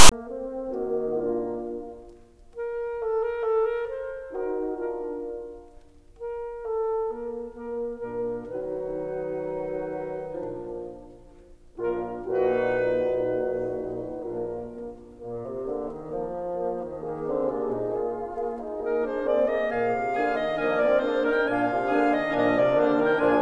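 From 0 to 0.12 s, file tags played as audio: text metadata decoded as samples gives a hard-edged, one-sided rasp ending in padding silence, not symmetrical full-scale noise.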